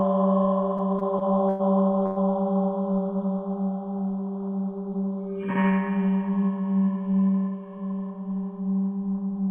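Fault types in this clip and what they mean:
Repeated stalls (stutter): Between 0.77 and 1.74 s the sound catches four times, the longest hold 103 ms. Late packets kept emptying the buffer, so playback drags without losing audio.
Call audio freeze: At 2.06 s the sound holds its last moment for 104 ms, then resumes without silence. Packets were likely delayed, pushing everything after it later.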